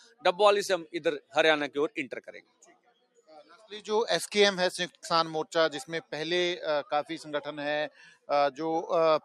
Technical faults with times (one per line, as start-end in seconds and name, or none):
0.00-9.24 noise suppressor applied to music or sounds
0.00-0.25 sound cut by the noise suppressor
2.25-3.66 sound cut by the noise suppressor
7.90-8.29 sound cut by the noise suppressor